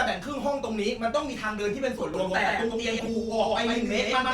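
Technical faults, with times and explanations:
1.99–2.04 s and 2.99–3.08 s: corrupt frame decoded. Damaged compressed frames were played as if valid. The first hit spans a couple of frames and the second a few. Misread gains and codes put energy at the wrong frequencies, so each sounds like a brief squeaky chirp or noise burst peaking near -20 and -15 dBFS. Unlike a click or dropout, each lasts roughly as long as the frames it hits and carries spurious content.
2.14 s to the end: doubled audio track. A second full-band copy enters abruptly, about as loud as the original and roughly a tenth of a second behind, and continues to the end. It was likely captured again through a slower path or left by an edit holding two out-of-step copies. Echo or reverb would decay and add room colour. This copy stays at the same level and has the same tone as the original, so the sound turns into a steady slapback doubling.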